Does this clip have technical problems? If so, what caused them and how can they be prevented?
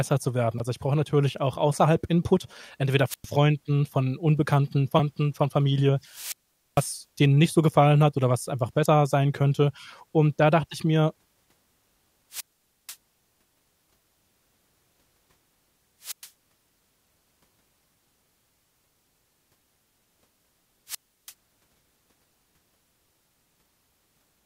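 Yes. Brief glitches at 0.57–0.60 s, 4.96–5.00 s and 8.82–8.86 s are damaged data in a compressed stream: corrupted frames make the decoder lose sync and search for the next frame header. Verify file integrity and use error-checked transfer or storage.

Hiss rising into near-silent holes at 3.08–3.27 s, 6.04–6.99 s, 12.31–12.96 s, 16.02–16.29 s and 20.87–21.33 s are wireless microphone squelch dropouts. The muted gaps last about 0.10 s, 0.45 s, 0.49 s, 0.11 s and 0.33 s, as the fading radio signal trips the receiver's squelch. Keep line of sight, use diversity receivers and fresh batteries, and choose a clear frequency.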